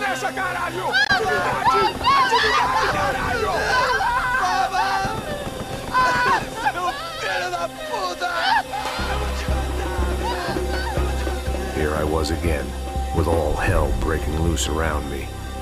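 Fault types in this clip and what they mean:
Damaged data in a compressed stream: at 1.03 to 1.10 s a brief disturbance of about 70 ms breaks into the sound. A stretch of the compressed bitstream there has been corrupted, so the decoder cannot read those frames properly, loses its lock on the frame structure and hunts for the next valid header. It resumes once it resynchronises, which is why the disturbance is short.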